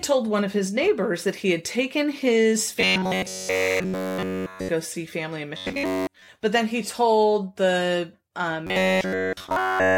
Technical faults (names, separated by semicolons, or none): robotic sound from repeated short buffers